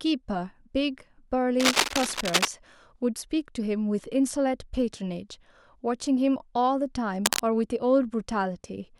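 From 1.60 to 2.48 s, dense, uneven bursts of scratching ride over the speech. They are about as loud as the voice. A shorter burst returns from 7.25 to 7.40 s. This is cable scratch noise, likely from a worn cable or connector being moved.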